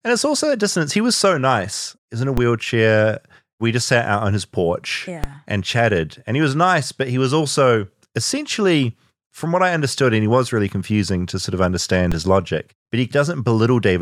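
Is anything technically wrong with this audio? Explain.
Yes. Three low thumps interrupt the speech: at 2.37 s just after "in a", at 5.24 s between "out on his porch" and "and chatted", and at 12.12 s between "to sort of understand" and "his logic but". Each is a DC step, where the waveform's zero line jumps abruptly to an offset of about -8, -8 and -9 dBFS. A 20 Hz high-pass then lets the offset decay back to centre. The speech continues unchanged through each step.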